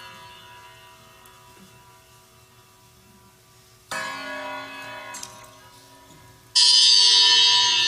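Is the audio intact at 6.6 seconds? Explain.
No. At 6.55 s compressed frames are skipped: around 30 frames of 23.2 ms each, roughly 0.7 s of audio, never play, so the sound jumps ahead abruptly. A spectrogram shows a sudden mismatch at the join.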